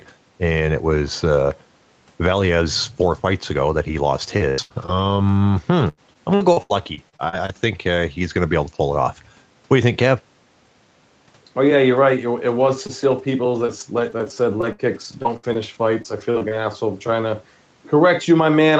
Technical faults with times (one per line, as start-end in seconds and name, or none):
4.37-7.51 repeated packet loss (robotic sound)
12.61-16.53 repeated packet loss (robotic sound)